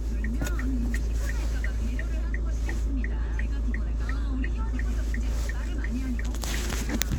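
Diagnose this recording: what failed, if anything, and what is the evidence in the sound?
Nothing failed in this recording of sounds. No stage of the chain leaves any audible evidence of a fault.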